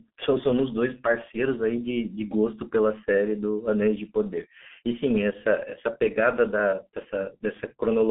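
From start to finish the speech runs through what sounds like the G.723.1 codec, the old low-rate internet-telephony scheme, and the damage is heavy. The band sits at roughly 150 Hz to 3.5 kHz, with nothing at all above 3.8 kHz, so the voice comes out muffled and boxy. The coarse modelling, which fits its 6.3 kbit/s mode, adds a hoarse, grainy edge and smears the consonants together.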